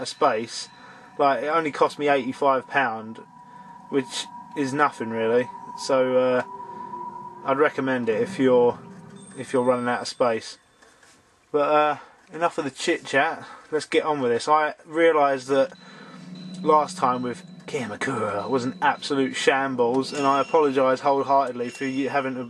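No technical faults can be heard in this audio.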